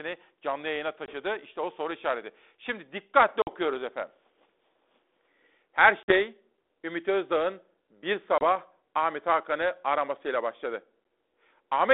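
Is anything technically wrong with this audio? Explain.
Yes. Packet loss on an ADPCM call hits this speech at 1.06 s (just after "canlı yayına"), 3.42 s, 6.03 s and 8.38 s. Gaps of 20 to 50 ms drop to hard silence, leaving the decoder's predictor and step size mismatched, so speech resumes with brief, slight distortion, settling within tens of milliseconds.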